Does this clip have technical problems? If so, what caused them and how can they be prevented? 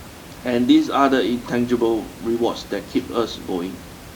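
No, nothing in this speech clip points to a technical problem, so there's nothing to prevent; the room noise, sitting about 19 dB below the speech, is simply part of the space it was recorded in.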